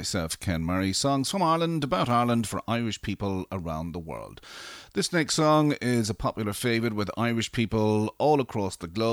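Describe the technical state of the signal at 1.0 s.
At 1.0 s the speech sits inside a run of clock drift buffer slips lasting from 0.70 s to 9.10 s. A short click recurs every 1.4 s across that span, roughly seven in all. The likely cause is two devices on independent clocks about 150 ppm apart, so the buffer between them slowly drifts until a handful of samples, around seven, is dropped or repeated. Each correction produces one of the brief clicks.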